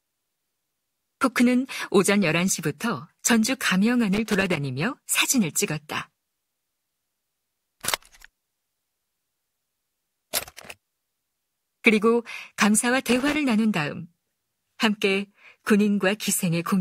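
At 4.14 to 4.57 s and again at 13.10 to 13.36 s, the speech breaks into loose connector crackle: a worn contact rapidly opening and closing chops the signal into scratchy, irregular bursts, unlike the evenly spaced ticks of digital clicks or a single clean dropout.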